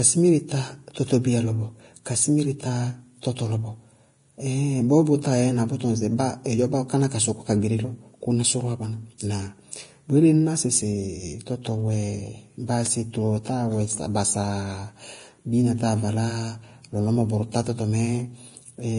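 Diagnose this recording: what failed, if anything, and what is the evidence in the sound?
The codec stage failed, and the damage runs through the whole clip. Nothing reaches above 10.5 kHz. The speech treble sounds hissy and grainy. The likely cause is heavy Vorbis compression, consistent with about 31 kbps. Coarse quantisation replaces fine high-frequency detail with noise.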